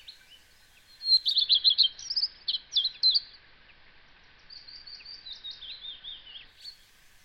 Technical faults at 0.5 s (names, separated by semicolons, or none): none